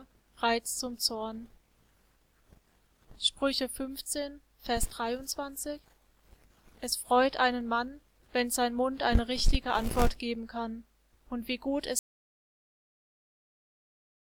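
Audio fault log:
11.99 s to the end, audio dropout to silence: at 11.99 s the sound stops abruptly in mid-flow and never returns, leaving about 2.2 s of silence through to the final sample. There is no fade and no room tone underneath, so the break is stark rather than a natural pause. The likely cause is a lost input, such as a disconnected device, a failed link or an accidental mute, while recording carried on writing empty samples.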